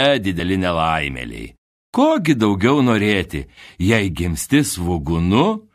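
Overlap between stream segments occurs at 0.40 s and again at 4.40 s. Neighbouring segments, which sound like they are about 2 s long, carry overlapping time stamps, so the player trims away sound that was never duplicated. Each splice drops a few milliseconds and jumps the waveform, giving a tiny skip.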